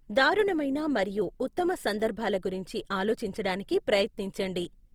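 Across the whole clip the speech has a grainy, rough texture, with a plainly audible noisy fizz rather than the swirly gaps you'd get from MP3. That points to Opus compression, likely in its music (CELT) mode at a low rate that fits roughly 24 kbps. With too few bits, it fills bands with folded or noise-like content, so detail turns coarse. The top end still reaches about 20.2 kHz, so it isn't muffled.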